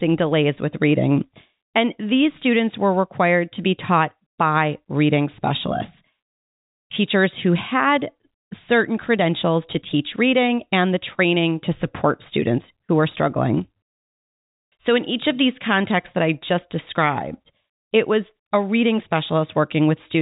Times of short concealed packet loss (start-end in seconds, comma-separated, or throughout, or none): none